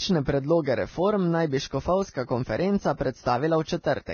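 From start to finish the speech sounds band-limited, with nothing above 6.5 kHz, and the upper range that's left is hissy and grainy, with consonant attacks smeared. That's the signature of heavy Vorbis compression, likely at a very low quality setting, roughly what you'd expect near 18 kbps. The encoder chops off the top end and quantises the remaining treble so coarsely that fine detail turns into noise of similar energy, which is where that rough texture comes from.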